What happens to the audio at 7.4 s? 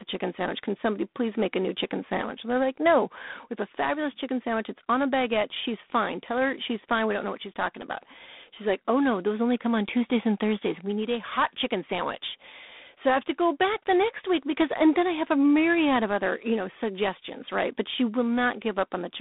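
At 7.4 s the speech carries G.726 ADPCM damage, present for the whole clip rather than starting there. The codec sends only a few bits per sample describing the difference from a running prediction. Here the coarse quantisation, which fits 24 kbit/s, leaves a harsh, rasping hiss that rises and falls with the speech level. A spectrogram shows nothing above 3.8 kHz, a band of roughly 150 Hz to 3.6 kHz, and grainy noise filling the gaps between harmonics.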